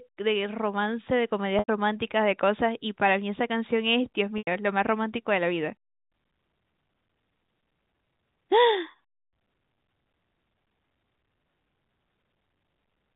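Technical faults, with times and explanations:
1.59–1.68 s, 4.38–4.47 s and 8.91–8.94 s, packet loss with pitch repetition: audio went missing and the receiver bridged each gap by looping the last pitch period. The 30 ms gap sounds like a briefly held, buzzy tone. The two 90 ms gaps (the length of about three 30 ms packets) fade toward silence before the sound cross-fades back. On a spectrogram, each gap shows frozen, evenly spaced harmonics below the 4 kHz telephone band edge. On the waveform, identical repeating cycles shrink in amplitude.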